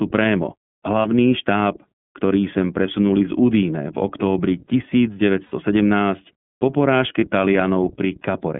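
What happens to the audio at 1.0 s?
Lost iLBC frames occur from 1.02 to 1.05 s, just before "štáb ktorý sem presunuli". About 30 ms of audio went missing, which fits one dropped 30 ms packet. The decoder filled the hole by repeating the last pitch cycle blended with noise, so the gap sounds like a brief, slightly buzzy held vowel rather than silence. Because each iLBC frame is coded independently, the voice returns cleanly right after the gap.

The concealment sits inside the iLBC codec's narrowband sound, which runs through the whole clip. The line passes only about 150 Hz to 3.4 kHz, so the speech sounds thin and muffled. The coding damage is plainly audible as a rough, somewhat synthetic edge on the voice, consistent with iLBC's 30 ms frame mode at roughly 13 kbps.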